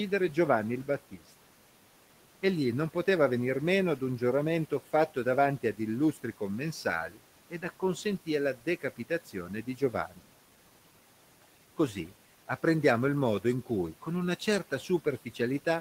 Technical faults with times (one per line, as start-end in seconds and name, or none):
7.09-7.19 speech cut by the noise suppressor
8.56-10.24 speech cut by the noise suppressor